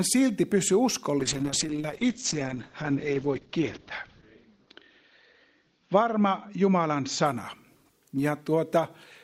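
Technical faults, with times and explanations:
1.2 to 8.55 s, call bitrate drop: the bandwidth estimate sank and the encoder got starved, which sounds like a slide from roughly 128 kbps to 8 kbps. The top end narrows from 20 kHz to 8 kHz, so things turn muffled and watery, worst for 2.8 s.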